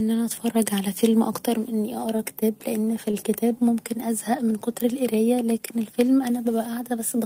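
At 2.85 s the speech hangs briefly: a short stall from a late packet. The packet missed its slot, the jitter buffer emptied, and the receiver stretched the last sound for about 23 ms before resuming where it stopped, so nothing is lost but the sound is held slightly too long. The same happens at 3.11 s, stretched about 19 ms, each heard as a hold with a faint buzz or dip.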